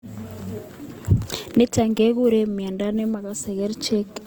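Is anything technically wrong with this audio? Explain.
Yes. Throughout, the speech sounds grainy and rough, which is likely Opus compression in its music mode, consistent with roughly 24 kbps. Starved bands are filled with folded or noise-like energy. A spectrogram shows speckled, smeared high bands up to about 20.2 kHz.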